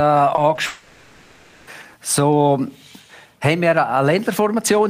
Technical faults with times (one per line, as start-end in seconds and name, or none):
0.35-0.59 short concealed packet loss
0.67-1.69 long network dropout